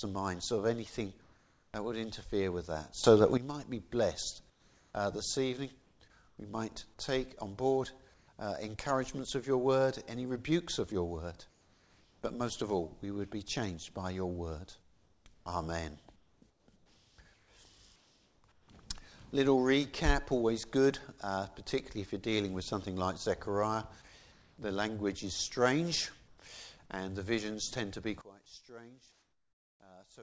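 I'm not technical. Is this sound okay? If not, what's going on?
No. Several times the background sound turns into a smooth, featureless noise: at 1.22–1.74, 4.50–6.38, 8.14–8.28, 11.50–12.22, 14.82–18.68, 24.32–24.58, 26.28–26.38 and 29.12–29.80 s. This is likely comfort noise in place of the background: the call software stops sending during pauses and fills them with invented noise.

The volume also suddenly leaps up at 3.04 s and drops back at 3.37 s, then plunges much quieter from 28.21 s to the end. This sudden gain jump is likely a volume setting being switched instantly rather than faded.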